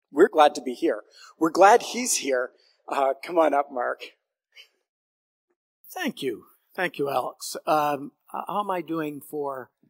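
No technical faults can be heard anywhere in this clip.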